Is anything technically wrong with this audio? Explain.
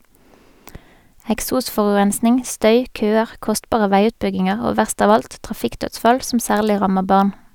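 No, nothing technically wrong can be heard anywhere in this speech recording.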